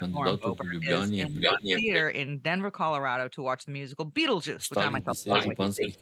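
From 0.0 to 0.9 s the speech drops in level by up to about 20 dB, in pieces totalling around half a second. The same happens from 1.25 to 1.91 s, shallower at about 10 dB over roughly 0.4 s. This is speech suppressed in double talk, likely caused by the echo canceller failing to separate the near talker from the far-end loudspeaker signal while both sides spoke, and attenuating both. It recurs from 4.99 s to the end, again up to about 20 dB deep across roughly 0.7 s.

Overlapping the second dip, from 1.32 to 2.04 s, a copy of the speech arrives 513 ms late, around 5 dB louder than the direct speech. This is echo leak, likely from a loudspeaker-side echo canceller not fully removing what its microphone picked up, so that a delayed copy is returned. Two more instances at the same 513 ms delay fall within the final suppression. From 5.02 to 5.49 s the copy is again about 5 dB above the speech, and a brief scrap from 5.83 to 5.92 s sits about 5 dB below it.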